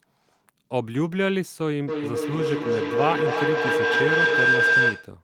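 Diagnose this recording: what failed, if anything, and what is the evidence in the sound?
A feedback howl, an acoustic loop between two call devices in one room, runs from 1.88 s to 5.23 s. Each trip gains level, narrowing to a tone near 1.5 kHz about 5 dB above the speech, pulsing roughly every 0.3 s: a bright horizontal spectrogram line and a beating waveform envelope.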